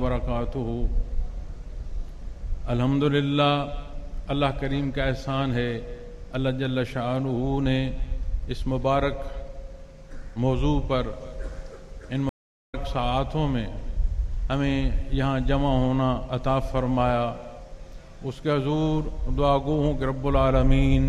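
A stream reconnect at 12.29 to 12.75 s: the connection dropped, leaving about 0.4 s of silence, then the player reconnected and started a fresh decoder mid-stream. The audio picks up roughly a third of a second later than where it cut off, so that stretch of sound is skipped.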